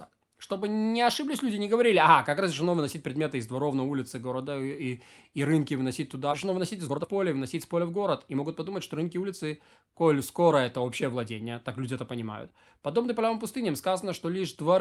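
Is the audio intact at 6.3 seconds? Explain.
No, there's a skip ahead at 6.31 s. Roughly a second of the speech just isn't there: that chunk got dropped, either in transit or by a jitter buffer that overflowed while later audio was already queued, so playback jumps straight to the newer material. Nothing fills the hole and there's no silence, so the two sides butt right up against each other and the speech abruptly lurches forward mid-flow.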